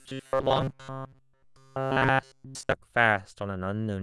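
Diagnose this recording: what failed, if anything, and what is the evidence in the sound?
Robotic sound from repeated short buffers, 0.01 to 2.73 s: the speech becomes a rigid 133 Hz buzz, likely a starved driver buffer looping 7.5 ms chunks.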